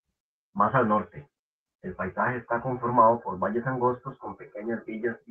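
Throughout the speech the pacing feels faintly unsteady, with small hiccups. This is clock drift between sender and receiver: the sender's clock runs roughly 3% slow, so the receiver's buffer keeps draining. From 0.06 to 4.97 s, repeated timing corrections are heard as stretched spots at uneven intervals, with speech running at 97% speed as the receiver repeats short pieces, adding about 150 ms.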